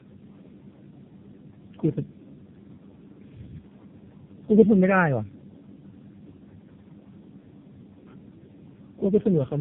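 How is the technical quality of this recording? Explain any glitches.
Poor. Throughout, the speech sounds rough, muffled and warbly, with nothing above 3.6 kHz. This is tandem speech coding: the audio was decoded and re-encoded by three low-rate speech codecs in a row, each compounding the previous one's damage, consistent with an AMR-NB, G.723.1, AMR-NB chain.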